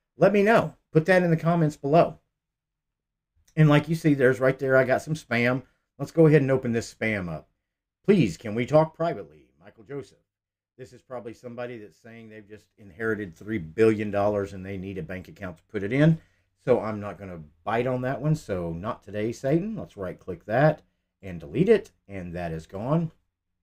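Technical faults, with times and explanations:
8.72 to 9.32 s, zipper noise: the level drops roughly 15 dB in 1 dB steps at about 30 a second, and each jump clicks, so it zips.
12.52 to 13.44 s, zipper noise: same thing coming back up, roughly 15 dB in unsmoothed 1 dB steps, ticking along as the gain climbs.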